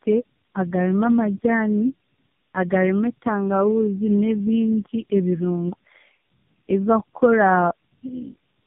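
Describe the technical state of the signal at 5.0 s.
Tandem speech coding, present throughout and so at 5.0 s: three low-rate speech codecs in a row each re-encode prior damage, leaving rough, muffled, warbly speech with nothing above 3.6 kHz.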